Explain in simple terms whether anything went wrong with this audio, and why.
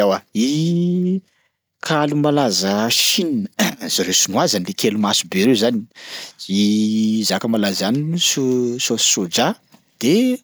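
Nothing went wrong here: the speech comes across as a steady, intact signal, with no technical faults to be heard anywhere in the recording.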